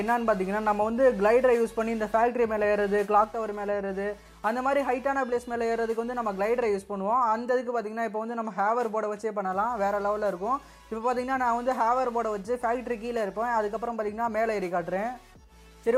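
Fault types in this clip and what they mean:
Sudden gain jump: at 3.24 s the level drops by about 4 dB between one sample and the next and stays there to the end, likely a gain setting applied without a ramp; the waveform envelope steps down abruptly, and the spectrogram dims uniformly, background noise included.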